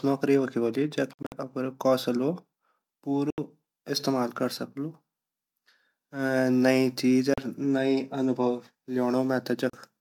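Four Bluetooth dropouts break up the speech, each a hole of silence that likely comes from packets missing the headphones in time. Right after "नौकरी वख वोली जख", 1.13 to 1.32 s stutters with scattered gaps totalling about 131 ms, the longest 56 ms. A 75 ms gap at 3.30 to 3.38 s precedes "इस्तेमाल कर सक्लु", then 37 ms gaps fall at 7.34 and 9.70 s. The waveform shows flat silent stretches, and the spectrogram shows blank vertical bands across all frequencies. Each time, the speech resumes further on rather than where it stopped.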